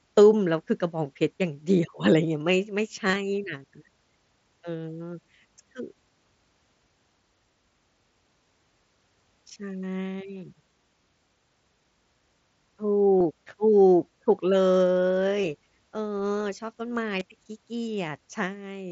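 Voice packets between the Bluetooth headset and phone were dropped at four points in this speech clip, which carries the band-limited sound of the wideband mSBC headset codec. This is concealed Bluetooth headset packet loss: the receiver fills each gap by repeating a matching stretch of the preceding waveform, so the losses come through as brief buzzy, held fragments rather than silences. The worst spans 3.08 to 3.16 s, about 45 ms of loss scattered over 75 ms with no run longer than 15 ms. Shorter ones follow at 13.19 to 13.21 s, 15.42 s and 17.19 s.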